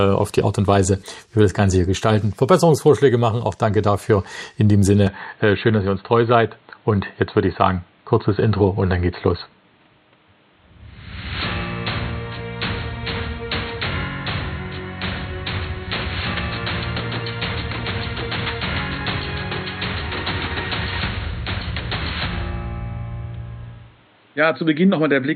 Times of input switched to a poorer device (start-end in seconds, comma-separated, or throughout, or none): 5.07-25.36